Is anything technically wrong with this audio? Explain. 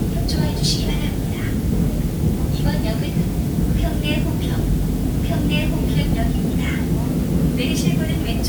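Yes. Throughout the clip there is low bit depth with dither. The audio appears to be quantised to about 6 bits, with dither added before rounding, so the rounding error becomes a steady, even hiss sitting roughly 20 dB below the signal, without audible distortion.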